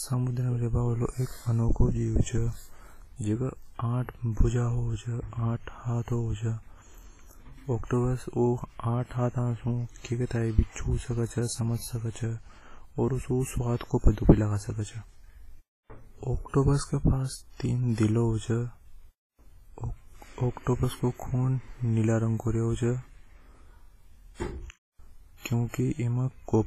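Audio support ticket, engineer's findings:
Speech, entire clip: heavy WMA compression damage, likely a low-bitrate encode near 24 kbps. Ringing, washy smearing, signal-following hiss. Spectrogram: empty band above 15.3 kHz, holes where weak components are zeroed.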